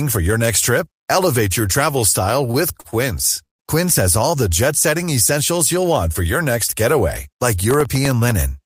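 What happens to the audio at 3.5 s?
At 3.46 s the last sound is carried on as a brief fading buzz or hiss and then stays silent until 3.61 s, then picks up exactly where it left off with nothing skipped. This is a call audio freeze, and the likely cause is packets stalling in transit so the jitter buffer ran dry. With no new audio arriving, the receiver filled the roughly 130 ms wait almost entirely with silence, and everything afterwards plays about 134 ms later than before.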